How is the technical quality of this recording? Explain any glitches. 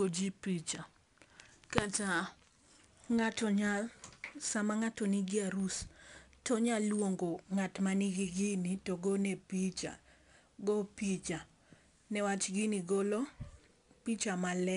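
The recording has plainly audible codec damage from 4-bit ADPCM compression across the whole speech clip. Each sample is coded as a coarse 4-bit step from a predicted value, so the quantisation error rides along with the signal as a gritty hiss on louder passages, with roughness on sharp onsets. Nothing reaches above about 10.6 kHz, which fits a sample rate near 22 kHz and roughly 88 kbps, so the top end also sounds dull.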